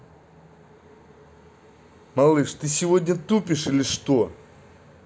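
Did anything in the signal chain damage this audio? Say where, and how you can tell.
No, nothing in the signal chain stood out as damaging this speech when I listened to it.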